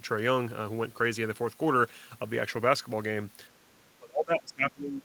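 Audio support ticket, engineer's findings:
Speech suppressed in double talk, 3.66 s to end of clip. Level dips steeply, about 30 dB at deepest. Likely echo canceller: both ends active at once, near talker mistaken for loudspeaker echo and attenuated.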